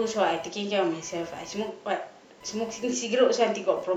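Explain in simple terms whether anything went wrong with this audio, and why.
Yes, there is computer activity noise throughout. A faint buzz pulses about a thousand times a second. It comes from the computer's electrical load leaking into the audio circuit.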